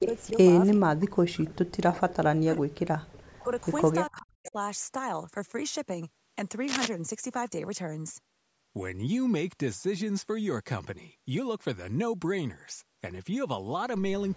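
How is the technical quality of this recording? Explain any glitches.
The recording is marred by echo and suppression problems in its first five seconds, and a scratch follows later.

Echo leak, 0.0–0.78 s, 2.09–2.16 s and 3.12–4.51 s: a delayed copy trails the speech by 398 ms, likely from a loudspeaker whose echo canceller let sound through. The copy is about 5 dB below the speech at first and about 25 dB below later. The consistent delay marks it as echo rather than reverberation.

Speech suppressed in double talk, 0.0–2.83 s, 3.43–3.5 s and 4.1–4.56 s: the canceller, likely confused by overlapping talkers, ducks the speech by up to about 40 dB. It cuts out in pieces, except for a shallow dip at 3.43 s. The speech itself drops, unlike echo, which adds sound.

Cable scratch noise, 6.68–6.88 s: a rough, uneven rustle roughly as loud as the speech, likely a worn connector being moved. Its dense, irregular grain sets it apart from a single click or dropout.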